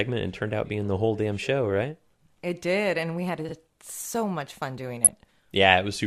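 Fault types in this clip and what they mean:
DAB burbling: From 5.03 to 5.31 s the speech is overlaid with burbling noise as narrow frequency bands jump up and down in level. Weak digital radio reception let bit errors, at a rate of about 0.7 percent, slip past error correction into the MP2 audio stream. Corrupted samples then put short noise blips into individual sub-bands, and corrupted scale factors boost or drop sub-bands for up to a frame, across a run of roughly a dozen frames.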